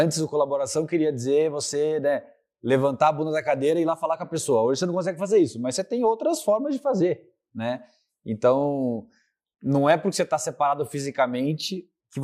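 No technical faults occur anywhere in the speech, so there is nothing to describe in time order.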